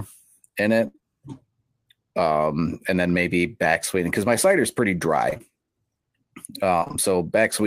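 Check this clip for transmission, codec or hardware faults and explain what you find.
Yes, the speech shows packet-loss damage in three places. There are no hardware faults.

Burst of packet loss, 0.87 to 0.96 s: about 60 ms of audio is lost. The receiver extends the last sound for roughly 68 ms while fading it down, so you hear a decaying hold. On a spectrogram, frozen harmonics or flat noise bands fade before the speech resumes slightly further on.

Short concealed packet loss, 0.96 to 1.04 s and 5.30 to 5.42 s: these follow "in it" and "my cider is pretty". About 20 ms at a time goes missing and is patched by continuing the previous pitch or noise, then blending back. Each patch sounds like a brief smear or wobble. The waveform shows slightly repetitive cycles, and the spectrogram shows short smudged columns.

Repeated packet loss (robotic sound), 6.80 to 6.95 s: holes up to 22 ms arrive in quick succession, and about half of this 0.16 s stretch is synthetic fill. 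Each hole is patched, and the next loss follows soon after. The result sounds choppy, and the spectrogram shows striped, comb-like interruptions across the harmonics.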